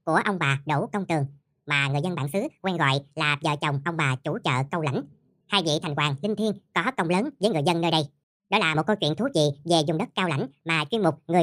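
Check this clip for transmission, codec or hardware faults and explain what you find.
One fault runs through the whole clip.

Wrong sample rate, from start to end: the samples are being played back faster than they were captured, with no resampling, so time and pitch are shifted together. The speech runs 1.5 times too fast and sits about 7 semitones high, which fits audio recorded at 32 kHz being played at 48 kHz. Voices sound squeaky, thin and rushed, with syllables crowded together.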